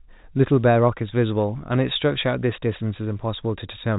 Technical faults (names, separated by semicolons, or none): none